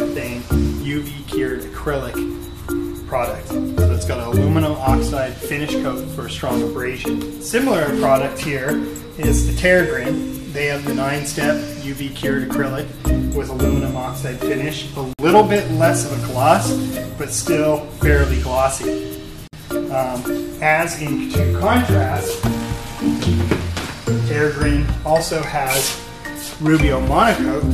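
At 15.13 s and again at 19.47 s there's a gap at a join of encoded pieces: gaps of roughly 56 ms and 55 ms. The pieces were encoded separately and spliced untrimmed, so encoder delay and end padding sit there, with smeared edges, before the sound resumes.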